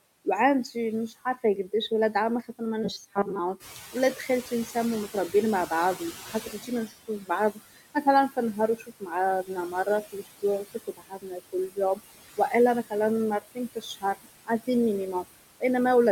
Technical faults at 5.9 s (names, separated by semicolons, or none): noise suppressor artifacts; noise suppressor catching up; speech cut by the noise suppressor